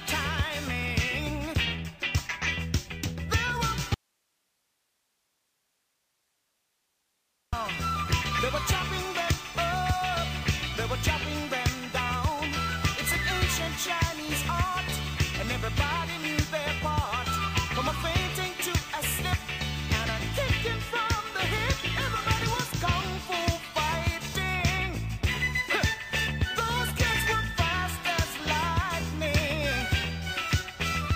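From 3.94 to 7.53 s an audio dropout to a faint residue cuts the sound abruptly, leaving only hiss far below signal level; likely a lost feed with the path still live.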